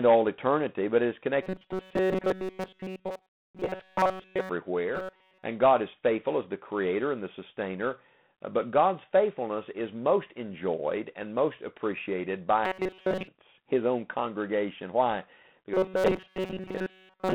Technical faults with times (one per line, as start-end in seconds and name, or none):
0.00-17.35 G.726 ADPCM
1.42-4.49 robotic sound from repeated short buffers
4.95-5.43 robotic sound from repeated short buffers
12.65-13.28 robotic sound from repeated short buffers
15.74-17.35 robotic sound from repeated short buffers